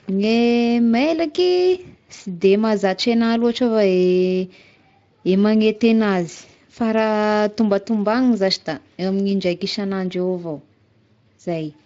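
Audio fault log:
No faults are present in this speech clip. The Speex coding can be heard only as a light coloration, which fits a fairly high quality setting.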